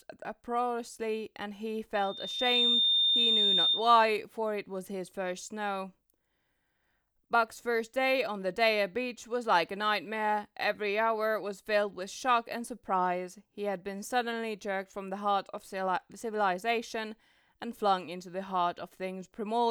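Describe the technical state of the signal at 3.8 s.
At 3.8 s you're right near the tail of a loudspeaker feedback squeal that runs from about 1.94 to 3.96 s. A microphone is picking up the speaker it feeds, and at 3.6 kHz the loop gain tops one, so that tone keeps feeding itself. It swells up over most of a second into a steady, piercing whistle sitting a few dB above the speech, then cuts off just after 3.8 s.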